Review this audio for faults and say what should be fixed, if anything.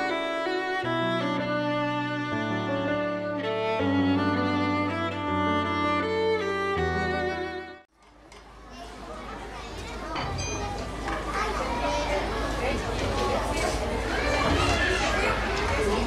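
Nothing here needs fixing; I listened all the way through and didn't hear anything wrong with it.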